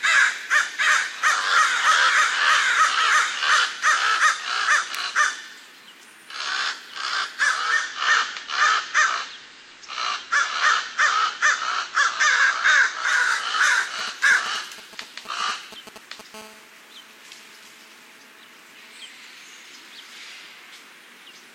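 From 7.51 to 13.34 s, digital radio blending to analogue: the receiver lost digital reception and cross-faded over about 0.46 s to FM, which brings in hiss roughly 35 dB down, with no level change. From 13.99 to 16.36 s, GSM signalling bursts: a nearby 2G phone sends radio bursts that the audio circuit rectifies, producing a galloping dit-dit-dit of short 217 Hz buzzes roughly 20 dB below the sound. From 16.36 to 19.07 s, GSM phone buzz: the phone now transmits in bursts 217 times a second during a call, so the pulses become a steady, raspy 217 Hz buzz with many harmonics, about 31 dB below the sound.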